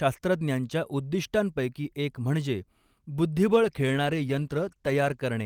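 At about 3.52 s the speech goes rough and muffled, and stays that way until around 5.31 s. That's a call bitrate drop: the encoder got squeezed from something like 48 kbps down toward 18 kbps for roughly 1.7 s, trimming the highs and coarsening everything.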